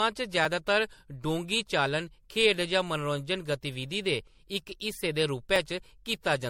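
From start to finish the speech has a swirly, smeared, hollow quality, with blurred consonant attacks. This is likely generation loss: the audio seems to have been lossy-encoded about five times, which fits a 64 kbit/s MP3 chain, with quantisation noise and spectral holes accumulating on each pass.

At 0.45 s and again at 5.56 s there is a short jump where the audio skips forward without any silence, losing roughly 10 ms each time. This matches a dropped buffer (overrun), likely from samples being overwritten before the program read them.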